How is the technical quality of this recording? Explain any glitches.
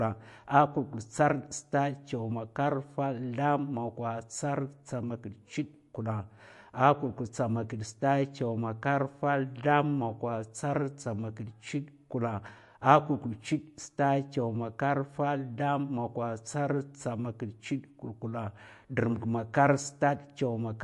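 The technical quality is poor: the speech has a watery, swirly texture from start to finish, with chirpy, metallic edges on s sounds and softened attacks. Nothing comes through above about 11.3 kHz, so the top end sounds dull. This is likely MP3 compression at a low bitrate that fits roughly 48 kbps. Starved of bits, the encoder cuts the treble at a fixed point and drops weaker frequency components, which flicker in and out between frames.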